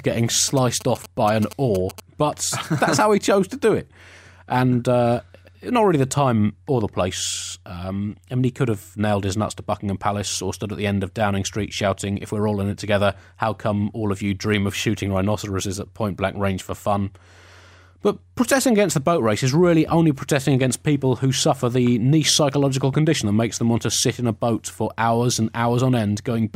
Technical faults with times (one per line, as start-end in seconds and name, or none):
0.48-2.00 GSM signalling bursts